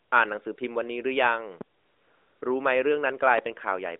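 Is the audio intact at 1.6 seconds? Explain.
No. At about 1.61 to 1.64 s a sudden voltage step was added to the signal, most likely from a plug, switch, static discharge or driver glitch, and the circuitry after it shaped that step into a brief pulse. The result is a single loud pop lasting under 30 ms that peaks well above the speech, roughly 15 dB louder. The speech carries on underneath it, still in its narrowband phone-line tone.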